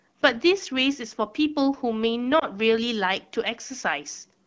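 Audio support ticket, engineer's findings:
Brief dip or warble in the speech at 2.39–2.45 s. Probable cause: lost AMR speech frames over the radio link, consistent with a single failed frame of about 20 ms. The decoder held the previous pitch and vocal tract settings at reduced gain, and the voice came back weak or rough for a moment. The AMR wideband (HD Voice) codec around it sounds clear, as expected of a rate near 12.65 kbit/s.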